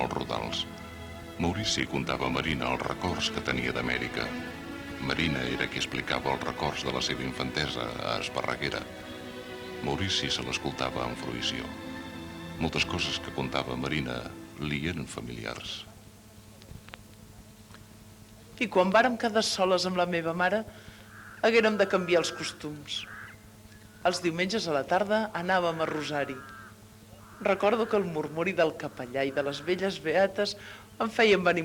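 From 1.26 s to 7.26 s the audio plays as an adaptive stream at a lower bitrate: codec artefacts rise, consistent with Opus falling from 64 to 16 kbit/s. Unlike a dropout, the quality switches abruptly without any gap or silence.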